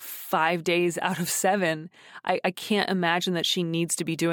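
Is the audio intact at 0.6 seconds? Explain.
Yes, at 0.6 seconds the speech runs through intact, with no dropout, click, distortion or other fault audible at that moment.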